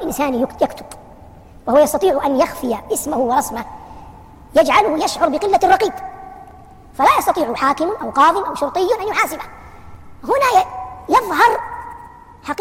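From start to finish the audio runs fast and sits high, about 1.38 times normal speed and roughly 5.5 semitones sharp. This is a wrong sample rate fault, with samples played back too quickly and no conversion, which fits a 32 kHz recording played at 44.1 kHz.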